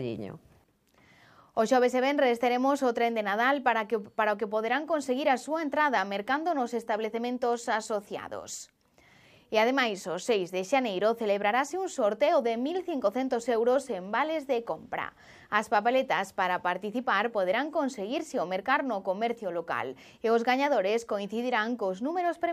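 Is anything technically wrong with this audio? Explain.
No, nothing technically wrong can be heard in this audio. No technical faults turn up anywhere in the recording.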